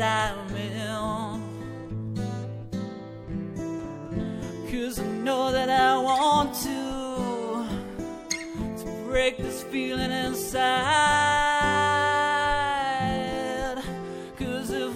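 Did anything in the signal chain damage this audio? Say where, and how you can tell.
No, nothing in the signal chain can be heard damaging this audio. Every stage from capture to playback passes the sound along without leaving an audible mark on it.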